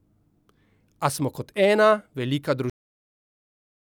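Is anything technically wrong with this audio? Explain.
Yes. Cut-off end at 2.70 s: the final buffers were never written, so the speech stops mid-sound and drops straight to digital silence with no natural decay.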